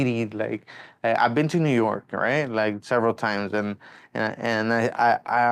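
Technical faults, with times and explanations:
Nothing stood out on listening through the speech.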